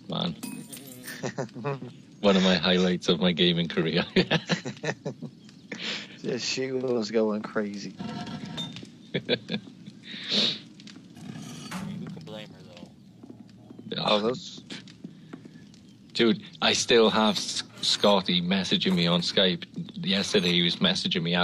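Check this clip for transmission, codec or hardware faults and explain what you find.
No faults detected.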